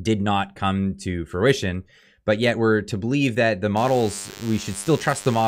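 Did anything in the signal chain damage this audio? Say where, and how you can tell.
Yes. The analogue stage picked up radio interference: from 3.76 s to the end at 5.48 s there is a DECT cordless phone buzz, a steady, thin tone at 100 Hz with a dense stack of harmonics, sitting roughly 20 dB under the signal. A DECT handset or base nearby was sending its 10 ms radio bursts, and the audio circuit rectified them into this audible buzz.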